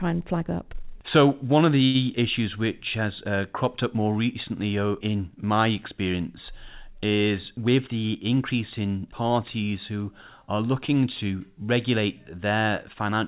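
A short stall from a late packet occurs at 1.85 to 1.97 s. A packet arrived late, the jitter buffer ran dry, and the receiver held the last sound for about 92 ms until it came. Nothing is lost, but the speech briefly drags with a slight buzz or dip.

A jitter buffer speed-up runs from 7.51 to 8.89 s, after the buffer had built up extra delay. The receiver trimmed short pitch-period slices again and again, removing about a tenth of a second in total. The speech plays at 107% speed with unchanged pitch and sounds slightly rushed, over the call path's telephone-band sound, which has nothing above 4 kHz.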